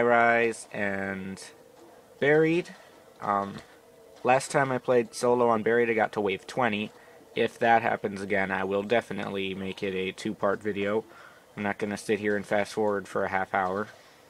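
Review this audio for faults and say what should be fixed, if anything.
Skip ahead at 3.57 to 3.59 s: playback jumps forward with no filler. Roughly 0.7 s of audio is missing, probably dropped because the buffer overflowed with later audio already waiting, and the two sides of the cut are joined almost directly.

Jitter buffer speed-up from 3.67 to 6.99 s: the audio runs at 109% speed with unchanged pitch and sounds hurried. The receiver held more than its target delay and kept cutting short pitch-period slices, about a third of a second in total, to catch up.

Both faults can be prevented by giving the jitter buffer enough headroom and adapting its target more gradually after bursts of delayed packets, so it neither discards queued audio nor has to compress playback so hard.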